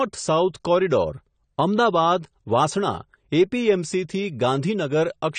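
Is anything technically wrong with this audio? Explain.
Yes. Throughout the speech, the likely cause is low-bitrate AAC compression, consistent with AAC-LC at about 32 kbps. Short of bits, the encoder drops everything above 9 kHz and coarsely quantises the rest, leaving the audio dull, smeared and plainly codec-damaged.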